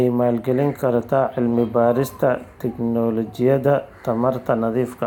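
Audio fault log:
No faults are audible anywhere in this speech recording.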